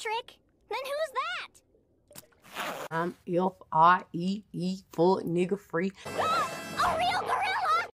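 No technical faults can be heard anywhere in the audio, with the signal holding steady and continuous throughout.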